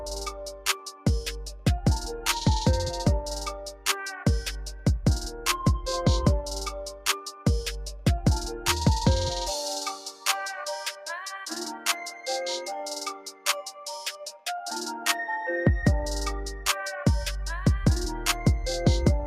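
Throughout the clip, a noise suppressor applied to music or sounds keeps treating sustained material as noise, so the level swings by about 5 dB and held parts thin and flutter. On a waveform the envelope pumps, and on a spectrogram steady bands flicker and sustained energy fades.

Sound is cut by the noise suppressor at 0.0–1.66 s (deepest drop about 10 dB), 3.51–3.86 s (about 9 dB), 4.71–5.46 s (about 7 dB), 6.78–8.06 s (about 8 dB), 9.97–10.25 s (about 8 dB) and 13.14–14.46 s (about 11 dB). Sudden onsets survive while sustains and decays sink. These show as dark gaps in the spectrogram and as notched, shortened tails in the waveform, a fraction of a second to about a second long.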